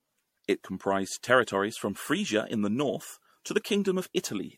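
Speech with generation loss throughout: swirly, hollow, smeared sound, blurred attacks and nothing above 16.5 kHz, likely from about seven repeated encodes consistent with MP3 near 67 kbit/s.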